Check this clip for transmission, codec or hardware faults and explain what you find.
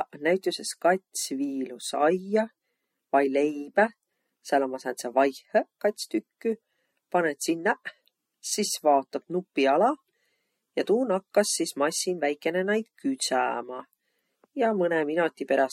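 One codec fault runs through the whole of this speech recording: MP3 compression damage that is plainly audible.

From start to finish the audio has a watery, swirling quality, with metallic chirps on s sounds and softened, smeared consonant attacks. This is likely MP3 encoding at a low bitrate, consistent with about 48 kbps. Short of bits, the encoder cuts the treble above a fixed frequency and zeroes weak frequency lines, which flicker on and off between frames. A spectrogram would show nothing above 16.3 kHz, as a hard horizontal ceiling, with patchy, blocky holes below it. The waveform would show pre-echo smearing just before sharp onsets.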